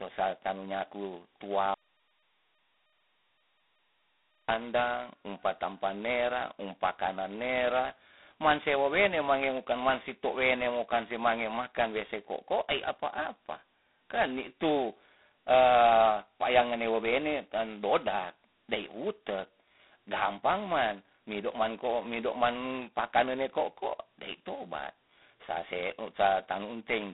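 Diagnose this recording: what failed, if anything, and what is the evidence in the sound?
The codec stage failed: the whole recording passes through G.726 ADPCM at a rate that points to 16 kbit/s, the 2-bit mode. Each sample carries only a coarse correction to a running prediction, so a harsh, rasping hiss rises and falls with the speech level throughout. A spectrogram shows a flat ceiling near 3.8 kHz with nothing above it, energy confined to roughly 200 Hz to 3.6 kHz, and grainy noise filling the gaps between harmonics whenever speech is loud.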